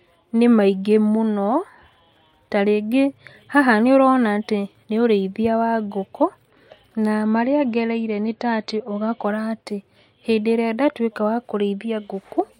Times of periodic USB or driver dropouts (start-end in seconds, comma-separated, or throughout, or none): none